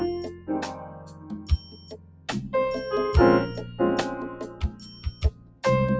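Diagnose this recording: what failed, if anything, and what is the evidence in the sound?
Noise suppressor applied to music or sounds, throughout the clip. This is a call-processing fault. A suppressor tuned for speech stayed active on non-speech audio, so it kept treating sustained and ambient parts of the sound as background noise. The gain swings across a range of around 20 dB as it decides what to keep. Onsets pass while held portions and tails are pulled down, which gives the audio a pumping, uneven texture over the call path's 8 kHz bandwidth.

Sound cut by the noise suppressor, at 0.32 to 0.48 s, 0.75 to 2.28 s and 4.52 to 5.63 s. In each span the suppressor classified the sound as noise and attenuated it more heavily than its surroundings. The drop reaches about 10 dB in the first, brief span and about 11 dB in the two longer ones. Sustained and decaying material sinks or is cut short, while sharper transients mostly survive.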